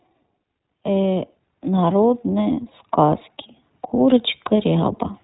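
Throughout the recording the speech has passed through the iLBC codec, a narrowband VoIP coder that handles each 20 ms frame independently, which fits its 15.2 kbps mode. Everything above 4 kHz has been discarded, so sibilants and consonant detail are dulled. The excitation is rebuilt frame by frame without drawing on the previous one, which gives the speech a plainly audible rough, slightly synthetic quality.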